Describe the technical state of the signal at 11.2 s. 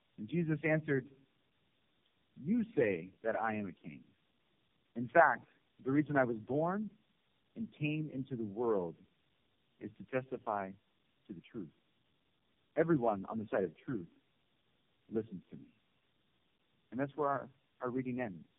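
At 11.2 s you're hearing tandem speech coding, and it runs through the whole clip. The speech sounds like it passed through three low-rate coders in a row, likely G.723.1 and AMR-NB twice, each re-coding the last one's damage. So it's rough, muffled and warbly, with nothing above 3.7 kHz.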